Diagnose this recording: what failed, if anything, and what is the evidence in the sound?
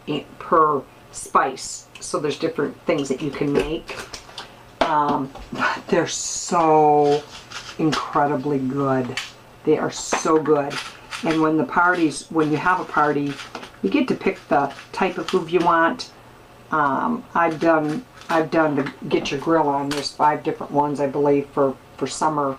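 Nothing in this recording points to a failure. No stage of the chain, from the analogue wiring through conversion and buffering to storage and playback, leaves any audible evidence of going wrong.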